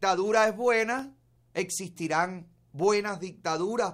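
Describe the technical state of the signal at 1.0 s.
At 0.99 s an electrical switching spike, likely arcing from a nearby switch, adds a sharp snap: a waveform needle and a thin vertical spectrogram line.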